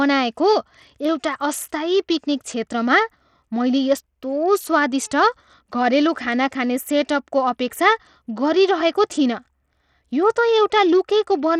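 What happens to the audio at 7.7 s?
At 7.7 s the speech carries the same damage heard through the whole clip. It is likely Bluetooth SBC compression at a starved setting, which fits a bitrate near 80 kbps. Too few bits reach the upper bands. The treble thins and flickers, with a gritty, aliased edge.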